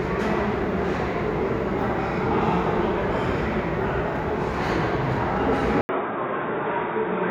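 At 5.81 s an 80 ms gap opens, and from there to the end the sound turns dull and boxy, with nothing above 3.8 kHz. Level holds steady and a new noise floor sits far below it, most likely an input switched to a poorer device.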